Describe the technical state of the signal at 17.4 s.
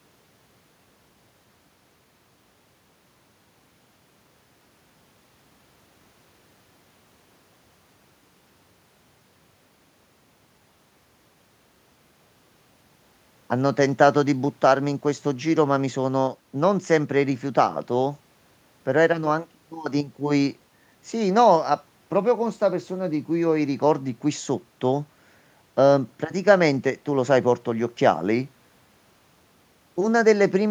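At 17.4 s the speech signal is intact, with no audible technical fault at that point.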